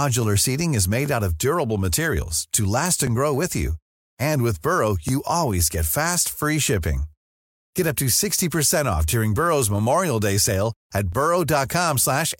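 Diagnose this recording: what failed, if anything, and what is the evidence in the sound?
The buffering stage has failed. The speech was handled in 2.0 s chunks with overlapping chunks, so each chunk began about 13 ms before the previous one ended and that sliver of audio plays twice at every join. This produces a brief click or stutter at 1.06, 3.07, 5.09, 7.10, 9.11 and 11.13 s. The steady 2-second spacing and the identical 13 ms duplication point to a chunking or buffer-boundary error.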